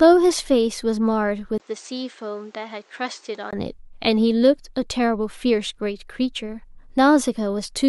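At 1.58 s the speech drops out for about 20 ms, then returns duller and somewhat quieter, with nothing above 8.6 kHz and a new background noise sitting roughly 30 dB under the voice. At 3.53 s the brighter, fuller sound comes back. This is an input switched to a poorer device: the recording likely jumped to a different, narrower-band microphone for those two seconds, bringing its own tone, lower level and noise floor, before switching back.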